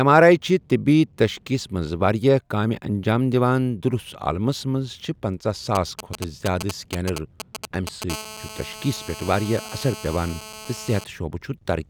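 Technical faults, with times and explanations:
5.75–8.04 s: GSM signalling bursts. A nearby 2G phone sends short groups of radio bursts at about 217 Hz. The audio circuit rectifies them into galloping ticks and brief buzzes, roughly 10 dB below the speech. On a spectrogram they show as clustered vertical stripes with stacked harmonics.
8.10–11.04 s: GSM phone buzz. Once a call is up, the phone transmits steadily at 217 bursts a second, and rectification gives a hard, raspy buzz about 16 dB below the speech. A spectrogram shows unbroken horizontal lines at 217 Hz multiples, and the waveform shows regular pulses.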